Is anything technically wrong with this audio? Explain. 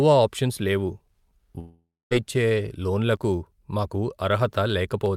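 Yes. From 1.59 to 2.13 s the speech cuts out in a long network dropout, likely caused by about 520 ms of audio never arriving. The last sound is stretched into a fading buzz, the final 250 ms or so falls silent, and speech resumes with the missing part skipped. On a spectrogram, the last frame smears into flat horizontal bands that thin to a blank gap. The waveform decays to near zero before the sound abruptly returns.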